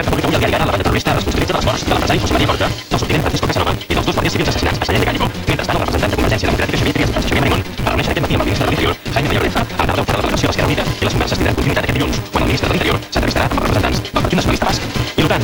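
From start to finish the audio carries a block size mismatch (truncated) fault. One stage writes longer blocks than the next reads, so the tail of every block is discarded. This fits a 256-sample read. A steady buzz at 188 Hz sits under everything, and the sound runs 1.88 times fast at roughly its normal pitch. The waveform shows abrupt discontinuities about every 5.3 ms. On a spectrogram these appear as evenly spaced vertical striations, with a comb of harmonics at multiples of 188 Hz.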